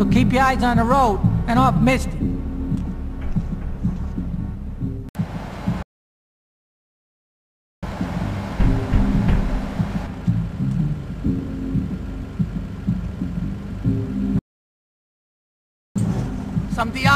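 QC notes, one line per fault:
5.82–7.83 s, playback stall: the audio cuts to silence mid-flow for about 2.0 s before the sound continues. The gap is a clean dropout rather than a fade, most likely the player running out of buffered data or its output thread being blocked.
14.39–15.96 s, playback stall: a second silent break of about 1.56 s, again stopping abruptly and then picking back up, with the same character and likely the same cause.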